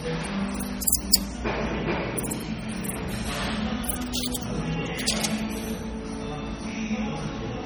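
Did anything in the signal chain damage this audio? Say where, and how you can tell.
Yes, at the codec stage: the whole clip has a watery, swirly texture with chirpy, smeared transients, likely MP3 compression at heavy damage, consistent with about 32 kbps. Starved of bits, the encoder zeroes weak frequency lines that flicker between frames.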